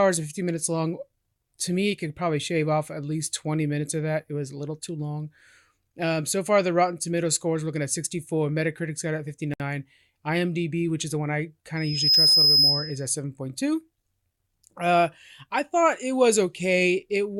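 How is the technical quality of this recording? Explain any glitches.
The recording has two audible faults: a brief dropout and a feedback squeal.

From 9.54 to 9.60 s, just after "got at", the speech stops for about 62 ms with blurred edges, then resumes exactly where it left off. This is a gap at a join of encoded pieces. The audio was encoded in separate sections and spliced without trimming, so the encoder's start-up delay and the padding in its final frame remain as dead air at the seam.

From 11.76 to 13.08 s, after "is the one I" and before "seven point two", a single 5.1 kHz tone swells in under half a second into a piercing whistle roughly 10 dB above the speech. This is loudspeaker feedback squeal. The microphone was picking up the loudspeaker it fed, and at 5.1 kHz the loop gain exceeded one. That tone kept reinforcing itself.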